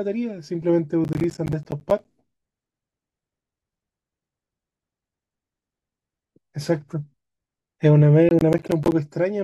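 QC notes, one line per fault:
1.04 to 2.11 s, processor overload crackle: a burst of gritty tearing over the speech for about a second. The processor is falling behind and missing buffer deadlines one after another, and each missed block drops out to silence with hard edges. The clicks come fast and close together, which fits buffers of around 10 ms.
8.29 to 8.92 s, processor overload crackle: the same tearing returns for about 0.6 s, then stops once the load eases.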